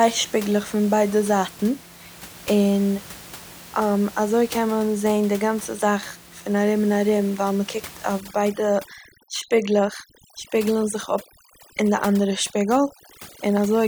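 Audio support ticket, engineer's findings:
Overdone noise removal from 8.20 s to end of clip, starting right after "מ'קוקט אויף". Background drops and breaks up into twinkling specks. The denoiser is set too strong: it cuts bands near its noise estimate, taking quiet speech detail with them. Room noise, about 20 dB below speech before this point, is not the fault.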